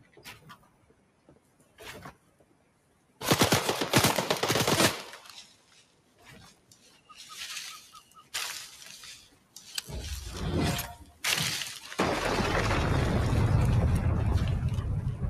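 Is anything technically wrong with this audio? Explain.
Yes. Throughout, the sound pumps and thins, with sustained parts and decays sinking while sharper onsets come through. A noise suppressor applied to music or sounds is responsible: tuned for speech, it treats steady tones and tails as noise, swinging gain by around 15 dB.

The clearest moments of sound cut by the noise suppressor fall at 0.00–1.81 s, 2.12–3.21 s and 5.43–7.15 s (each dipping about 14 dB), 7.81–8.34 s and 9.17–9.63 s (about 13 dB), and 10.99–11.24 s (about 10 dB). Held material there fades or its decay is truncated.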